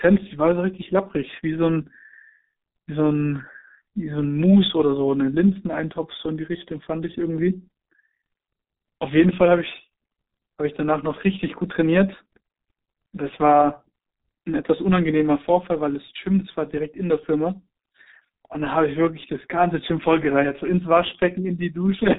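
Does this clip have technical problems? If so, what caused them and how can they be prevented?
Yes. G.723.1 codec damage throughout: muffled, hoarse speech, spectrogram blank above 3.8 kHz, fitting 6.3 kbit/s coding. Prevent it by routing calls through a wideband codec.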